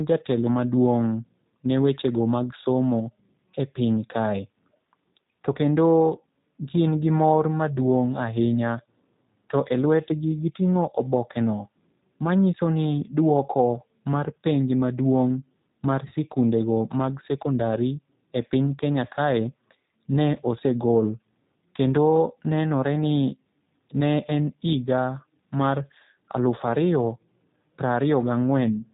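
G.729 codec damage runs throughout: the speech is rebuilt from a vocal tract filter, a pitch predictor and a few pulses per 10 ms frame, consistent with G.729A at around 8 kbit/s. Nothing above 4 kHz survives, and voices sound plainly rough and synthetic.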